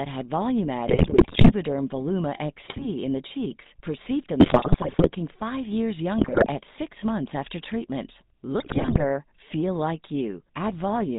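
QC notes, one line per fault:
Throughout: GSM full-rate codec. Nothing above 4 kHz survives, and the speech has a buzzy, gravelly roughness that fits the 13 kbps full-rate coder. The excitation is rebuilt from sparse, regularly spaced pulses through a vocal-tract filter, so fine voice texture is lost.
0.88–1.53 s, 2.64–2.86 s, 4.40–5.15 s, 6.18–6.47 s, 8.60–9.04 s: GSM bit errors. The speech breaks into squawks, pops and gargling. The second burst ends just before "in the cheeks perceived", the third falls between "in the cheeks perceived" and "five years", and the last between "six months after treatment" and "feel like". Corrupted filter, pitch and gain values distort the spectrum and make the level jump frame by frame.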